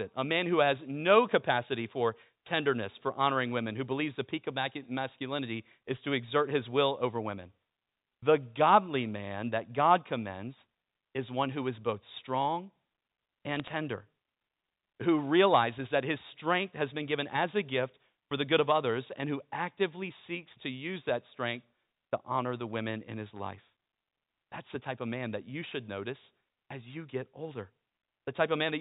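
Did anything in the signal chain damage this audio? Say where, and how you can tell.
Yes. Bit errors on the digital phone line flipped bits in the G.711 samples, leaving sharp ticks and crackle over the speech at 13.56–13.74 s and at 22.70–22.76 s, between "strength to honor the" and "in his life".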